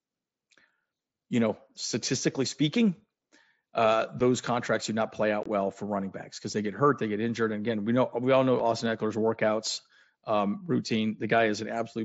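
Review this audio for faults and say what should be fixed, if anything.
Two short, hard-edged dropouts cut into the speech: a gap of 7.5 ms at 4.2 s and a longer hole of 22.5 ms from 5.43 to 5.46 s. These fit one lost frame and then three. This is unconcealed Bluetooth headset packet loss. Voice packets on the mSBC link between headset and phone never arrived, and silence or an idle pattern was played in their place instead of a patched-over estimate, so the edges are abrupt.

Enabling packet loss concealment at the receiving end, and keeping the headset close to the phone and clear of radio interference, would prevent these gaps.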